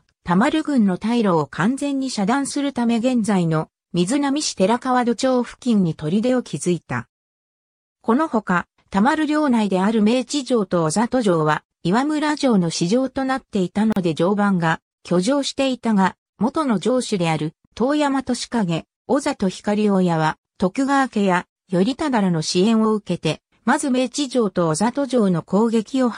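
At 13.92 s the sound drops out abruptly for about 39 ms, then resumes exactly where it left off, edges smeared. This is a gap at a join of encoded pieces: separately encoded sections, each carrying its encoder's start delay and last-frame padding, were spliced untrimmed.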